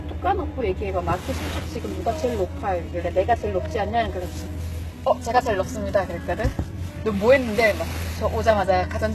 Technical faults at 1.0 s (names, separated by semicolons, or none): HE-AAC compression